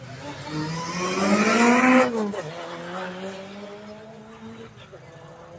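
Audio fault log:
Throughout: noise suppressor applied to music or sounds. A speech-tuned suppressor treats held tones and tails as noise and ducks them by roughly 10 dB, so the sound pumps and thins.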